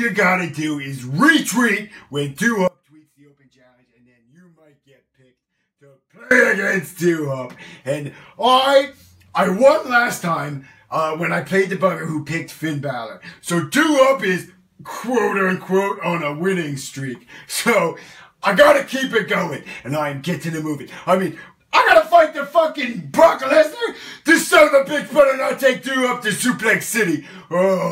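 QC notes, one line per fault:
2.68–6.31 s, audio dropout to a faint residue: the sound cuts off abruptly and for about 3.6 s only a faint residue remains, around 30 dB below its normal level, before it snaps back mid-flow rather than fading in. The hard edges at both ends rule out a natural pause. The likely cause is a loss of the wanted signal upstream while the path after the break stayed live and passed only that weak residue.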